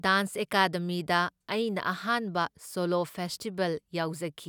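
No audible technical faults.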